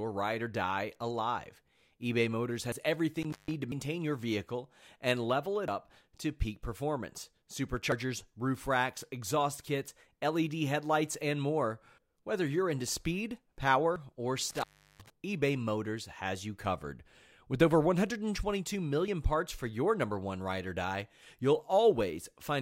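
Speech recording with two kinds of fault. The first is likely a dropped buffer (overrun): the capture software fell behind and the hardware overwrote blocks before they were read. At 2.72, 3.72, 5.68, 7.92, 13.96 and 19.08 s the sound jumps straight ahead with no silence, losing roughly 40 ms each time, or about a tenth of a second at 3.72 s (just before "your vehicle and level") and 7.92 s. The second is an intermittent contact: a loose cable or plug opened briefly between 3.22 and 3.54 s and again between 14.50 and 15.10 s. The audio cuts out for about 158 ms and 361 ms respectively, with crackle at each edge and faint hiss while the line is open.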